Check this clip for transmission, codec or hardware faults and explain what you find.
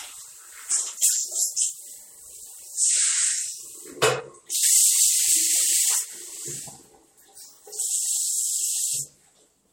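Nothing wrong turns up here; the sound comes across steady and intact, with no transmission, codec or hardware trouble to point to.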